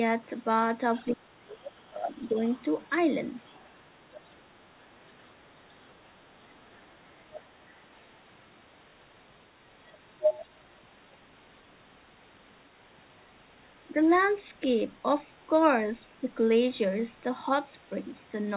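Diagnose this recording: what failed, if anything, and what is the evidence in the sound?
A second voice runs under the speech at 0.94–1.15, 2.3–2.88, 3.44–4.4, 5.01–7.99 and 9.92–10.45 s. It is about 15 dB down at first, sinks to about 35 dB down, and by 9.92 s is as loud as the speech itself. The stage is call processing: this is the other side's voice leaking through, most likely because the echo canceller left the far end's loudspeaker signal in the microphone pickup.

Between 1.14 and 2.39 s the speech dips and breaks up, losing roughly a second in pieces and falling by up to about 30 dB. This overlaps the leaked voice that begins at 0.94 s. The fault is speech suppressed in double talk, again in call processing. With both sides active, the echo canceller likely could not tell the near talker from the echo and attenuated everything, all within a call path already limited to 4 kHz.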